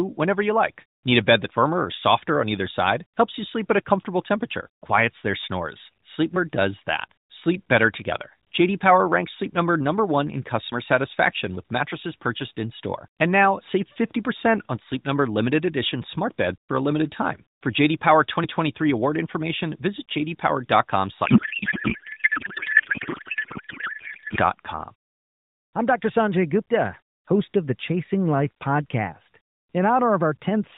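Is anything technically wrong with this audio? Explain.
Yes. From 21.26 to 24.41 s there is a codec payload misread. The speech, band-limited to 4 kHz by AMR narrowband coding, turns into garbled noise and warble that barely tracks it. The sound points to octet-aligned AMR frames being parsed as bandwidth-efficient, so the decoder reads each field from the wrong bit positions.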